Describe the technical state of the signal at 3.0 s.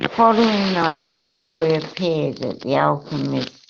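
At 3.0 s the speech signal is intact, with no technical fault to be heard at that moment.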